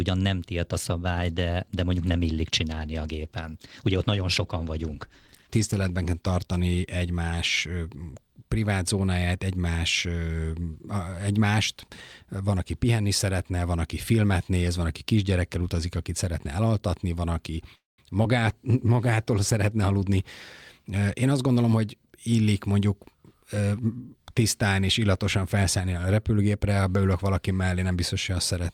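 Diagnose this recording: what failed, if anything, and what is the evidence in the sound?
Call bitrate drop, 0.72 to 7.95 s and again 18.27 to 22.80 s. This is a network-driven codec fault. In the first event the encoder's rate falls from 64 kbps to 15 kbps and stays at its lowest for about 5.2 s. The sound turns coarse and watery, and the top end is dulled because the encoder discards the highs to fit the budget. The second drop bottoms out at 19 kbps for about 1.9 s, so it is milder and shorter.

Call audio freeze, 17.75 to 18.00 s. This is likely a network stall that emptied the receiver's jitter buffer. The decoder extends the last sound briefly, then about 170 ms of silence follows, for a 228 ms hole in total. When the packets resume the sound continues from where it stopped, so nothing is lost, but the playout delay grows by 228 ms.

Short concealed packet loss, 18.04 to 18.07 s and 18.23 to 18.26 s. 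Each event is a network loss that the decoder patched. About 20 ms of audio is gone each time. In the first event only about 5 ms is synthesized and the delay shrinks by roughly 15 ms, so a fragment drops out. In the second, 18 ms is filled by continuing the preceding sound, heard as a brief smear before it blends back.

Jitter buffer speed-up, 19.88 to 20.18 s and 20.77 to 21.72 s. These are buffer adjustments at the receiver after the freeze piled up delay. Whole pitch periods are cut out repeatedly, so the speech runs faster at unchanged pitch. The first event plays at 125% and removes about 70 ms. The second plays at 112% over nearly a second and trims about 100 ms, and it sounds audibly hurried.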